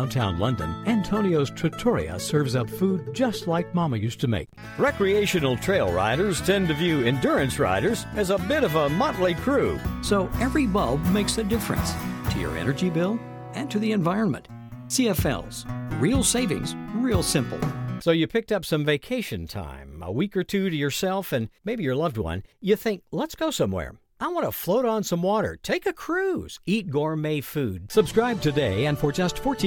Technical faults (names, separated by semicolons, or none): none